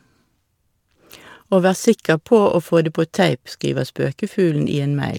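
No technical faults can be heard anywhere here.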